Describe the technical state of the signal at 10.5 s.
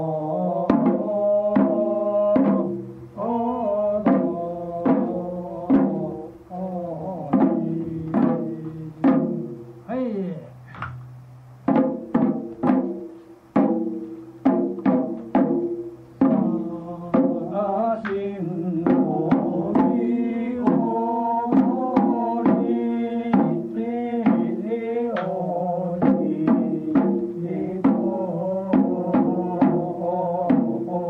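At 10.5 s the signal is intact, with no dropout, distortion, noise or other fault audible at that moment.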